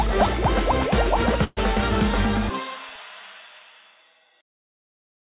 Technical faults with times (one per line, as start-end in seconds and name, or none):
1.44-1.59 call audio freeze